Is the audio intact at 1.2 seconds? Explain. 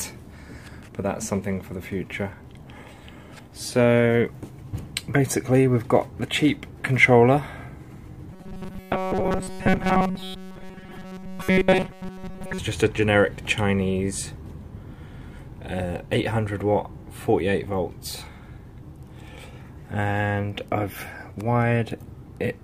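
Yes, the audio is intact at 1.2 seconds, with no dropout, click, distortion or other fault at that moment.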